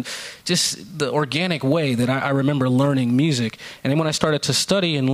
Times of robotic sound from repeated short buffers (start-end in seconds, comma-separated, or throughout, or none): none